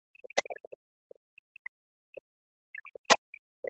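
Other side's voice leaking through, 0.22 to 0.43 s: a second voice sits not far below the talker, likely loudspeaker echo that the echo canceller failed to remove from the microphone.

Speech suppressed in double talk, 0.29 s to the end: the talker's level drops hard, at worst nearly to silence, likely because the canceller, hearing both sides at once, turned everything down.

Other side's voice leaking through, 2.73 to 2.88 s: faint scraps well beneath the talker, likely residual echo slipping past cancellation.

Other side's voice leaking through, 3.08 to 3.17 s: a brief intrusion matching the talker's own loudness, likely uncancelled loudspeaker echo again.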